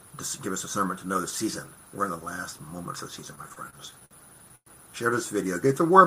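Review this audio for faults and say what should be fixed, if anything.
From 3.35 to 4.13 s the audio hitches repeatedly, catching and dragging forward in seven short breaks, the longest 57 ms. This is repeated stalls (stutter): packets kept arriving late or slower than playback, so the jitter buffer emptied again and again. Each time the receiver stretched the last sound to cover the hole, about 154 ms in all, roughly a fifth of that span. Nothing is lost, but the sound limps.

At 4.56 to 4.68 s the sound briefly hangs as a fading buzz or hiss and then drops to about 60 ms of silence before resuming exactly where it left off. That is a call audio freeze, likely caused by packets held up in transit until the jitter buffer ran dry. The receiver filled about 107 ms, and playback delay grew by the same 107 ms, so the audio now trails by that much.

From 5.67 to 6.03 s the sound runs slower at unchanged pitch, to about 91% speed, with held-out sounds. 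This is a jitter buffer slow-down: with its reserve running low, the receiver repeated single pitch periods and pause fragments to rebuild it, adding about 38 ms.

To prevent these, fix the network path's delay variation and give the jitter buffer a somewhat larger, adaptively managed target so brief late bursts are absorbed without emptying it.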